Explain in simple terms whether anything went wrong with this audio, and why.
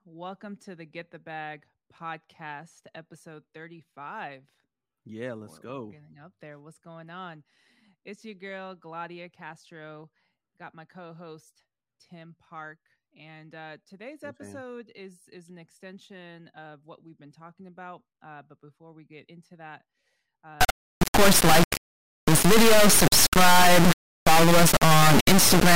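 From 20.61 s to the end, the speech becomes a loud buzzing square wave that goes silent in quiet moments. This is integer read as float: 32-bit integer samples were decoded as floats.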